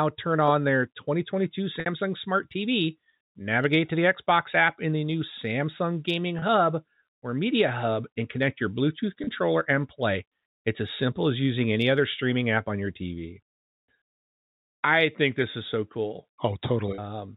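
Speech carried over a G.711 telephone link, with nothing above 4 kHz, shows packet loss with pitch repetition four times: 1.80–1.86 s (60 ms missing, which fits two 30 ms packets), then 6.39–6.42 s, 9.24–9.27 s just before "and play", and 16.95–16.98 s, each 30 ms. The receiver bridges each gap by replaying the last pitch cycle, so instead of a click the voice briefly holds on a slightly buzzy, frozen tone before resuming, and in the longer 60 ms gap that tone fades into silence before the speech returns with a short cross-fade.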